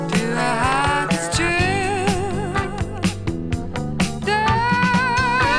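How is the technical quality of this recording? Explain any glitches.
No glitches or technical faults are audible here.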